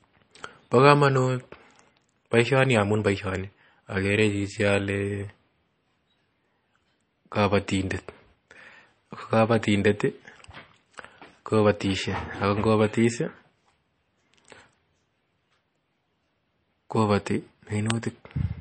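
From start to finish the speech has nothing above 8.4 kHz and a plainly audible watery, swirling texture, most likely MP3 compression at a low bitrate around 32 kbps. Unlike a simple low-pass filter, weak frequency components flicker on and off between frames.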